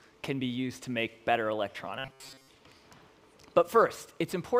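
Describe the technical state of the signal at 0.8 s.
At 0.8 s the signal is intact, with no audible dropout, distortion or other fault at that point.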